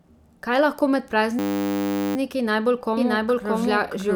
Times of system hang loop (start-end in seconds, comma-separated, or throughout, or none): 1.39-2.16